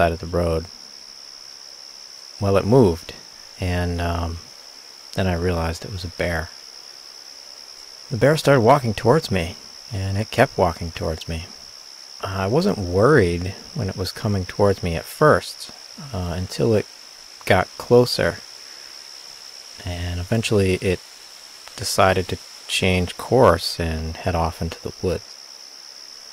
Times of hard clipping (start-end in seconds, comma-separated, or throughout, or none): 8.69-8.73, 23.42-23.50